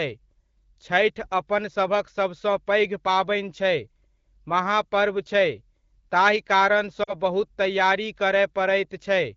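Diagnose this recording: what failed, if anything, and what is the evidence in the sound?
The failure is in the network stage: lost AMR speech frames. At 7.03 s the speech drops to near silence, then resumes at 7.14 s. The gap of about 40 ms fits two lost 20 ms frames. Radio errors corrupted those frames, so the decoder rejected them. It filled the hole by repeating the last good pitch and vocal tract settings with falling gain. Because this is AMR wideband at what sounds like 12.65 kbit/s, that fade is quick.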